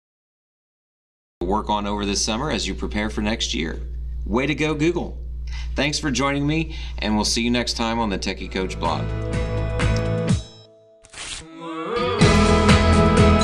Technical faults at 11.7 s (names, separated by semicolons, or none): none